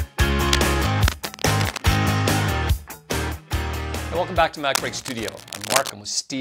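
Cable scratch noise, dense uneven scratching bursts, sits over the audio from 0.45 to 1.98 s and 4.74 to 5.90 s, about 10 dB and then about 5 dB below the signal. The likely cause is a worn cable, connector or control being moved.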